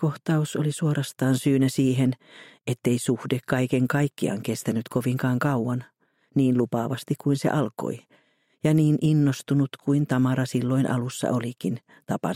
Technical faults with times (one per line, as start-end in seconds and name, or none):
none